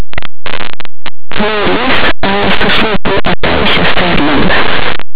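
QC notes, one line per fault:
Throughout: linear audio read as companded. Plain linear 8-bit samples appear to be decoded as mu-law codes, so values just to one side of zero expand to the largest outputs while the other side stays small, giving very loud, harsh distortion across the speech.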